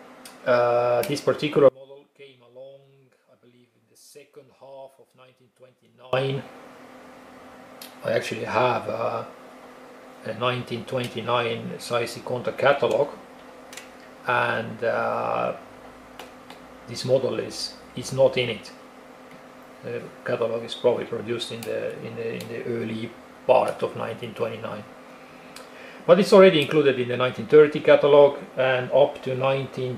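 From 1.69 s to 6.13 s the sound falls by about 28 dB, its centre nearly gone. The likely cause is one channel inverted: shared content cancels in the mono sum, leaving a faint difference signal.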